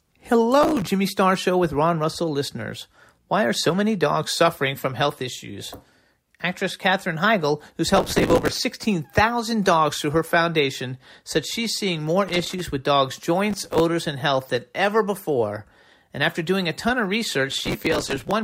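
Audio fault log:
0.61–0.89 s, 7.97–8.60 s, 13.51–13.80 s (after "with dogs'", before "and health than ever") and 17.51–18.33 s (after "doing a ton of"), processor overload crackle: the processor misses many consecutive deadlines, and each short buffer, which fits a size of around 5 ms, is filled with stale audio. The hard edges stack into gritty tearing that stops when the load eases.
12.28–12.61 s, loose connector crackle: between "said she's seeing more" and "with dogs'", a worn or dirty contact rapidly breaks and remakes the signal path, chopping the audio at irregular moments. This produces a brief, uneven scratching burst rather than a steady grit.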